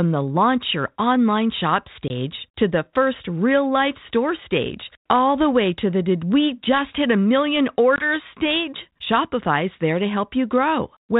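At 2.08 to 2.11 s, after "launch your online shop", and again at 7.96 to 8.05 s, after "just hit a million", a sharp 20 ms hole is followed by brief distortion, signs of packet loss on an ADPCM call: about one packet vanished, and the decoder's adaptive predictor and step size briefly lost step with the sender's.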